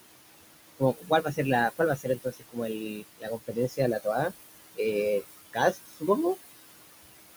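A speech recording carries noise suppressor artifacts throughout. The room noise, sitting about 12 dB under the voice, is pulled down by about 19 dB between phrases and swells back under them. On a spectrogram this appears as a gated, patchy noise floor with residual specks. The suppressor also produces speech cut by the noise suppressor, mistaking quiet speech for noise. This happens at 0.79–1.39 s (down about 15 dB, roughly a third of a second affected), at 1.97–3.79 s (down about 22 dB, around a second in total), and at 5.73–6.08 s (down about 19 dB, a fifth of a second). In these spans the waveform shows dips and the spectrogram shows missing speech energy, so the sounds come across faint or swallowed.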